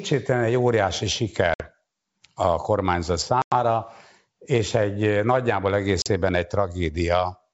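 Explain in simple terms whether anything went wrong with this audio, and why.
Packet loss on an ADPCM call cuts the speech three times: after "egy óriási" (1.54–1.67 s, 60 ms lost), "a kormányzat" (3.42–3.53 s, 100 ms) and "és egy eh nagyjából" (6.02–6.08 s, 40 ms). Each gap falls silent abruptly. Then the decoder briefly mis-tracks, so the speech returns slightly distorted.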